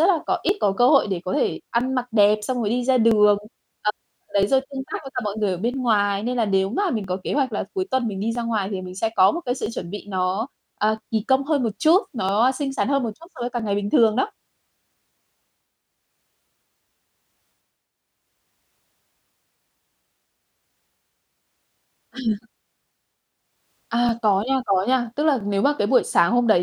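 From about 0.49 s, right after "là có", there's a regular tick every 1.31 s through to 25.4 s, some twenty in all. That's likely clock drift buffer slips: two clocks disagreeing by around 700 ppm, so a small block of samples periodically gets dropped or repeated.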